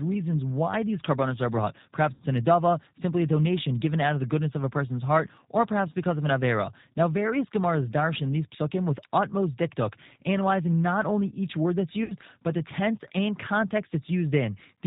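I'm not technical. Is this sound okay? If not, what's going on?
No. The whole recording has G.729 codec damage: an internet-phone format that rebuilds speech from a simplified model, so it sounds slightly rough, synthetic and muffled. At 2.14–2.22 s and 12.04–12.13 s there is VoIP packet loss concealed by the speech codec. Small chunks of data went missing, and the decoder filled each gap by stretching the preceding sound into a brief buzzy tone or noise that fades.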